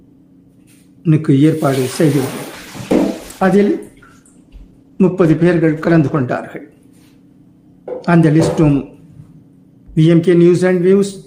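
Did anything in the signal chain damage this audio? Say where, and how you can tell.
Yes. A call bitrate drop hits the codec stage from 2.54 to 6.33 s. The sound turns rough and muffled, with the top band missing for about 3.7 s, which fits the encoder dropping from roughly 48 to 13 kbps. On a spectrogram the upper frequencies abruptly vanish and the remaining energy looks blocky and smeared.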